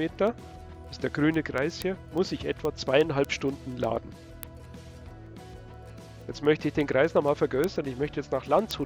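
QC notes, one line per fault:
0.16–8.83 s, word clock ticks: steady ticks about every 0.1 s, from an unlocked receiving clock drifting roughly 200 ppm and slipping a sample each time.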